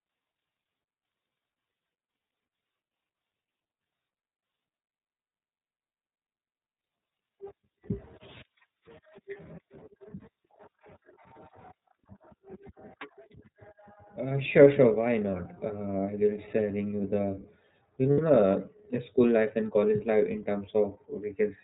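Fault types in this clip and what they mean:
iLBC codec: Present throughout the clip, this narrowband VoIP codec cuts everything above 4 kHz and codes each frame's excitation on its own, so the speech comes through clear but plainly rough and synthetic, with a dull, boxy top end. The grainy texture and band limit fit iLBC's 13.33 kbps mode with 30 ms frames, and the coding damage is easy to hear.
Lost iLBC frames: At 2.18 s, 5.27 s and from 18.11 to 18.21 s, the decoder fills missing packets by repeating the last pitch cycle blended with noise, so each gap sounds like a briefly held, slightly buzzy or breathy vowel. The first two are about 30 ms long, fitting a single lost 30 ms frame; the third is longer and fits two lost frames. Because each frame decodes independently, the speech snaps back almost immediately afterwards.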